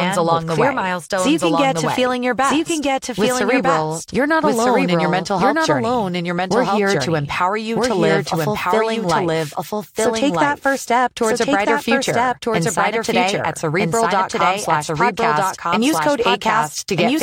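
From start to finish the speech carries a doubled audio track: a second, equally loud copy trails the original by about a second and a half, so every phrase is heard twice, overlapping the next. The likely cause is the same signal reaching the mix again through a slower path. Unlike room echo or reverb, the copy is full-band and uncoloured, arrives once rather than as a decaying series, and does not fade.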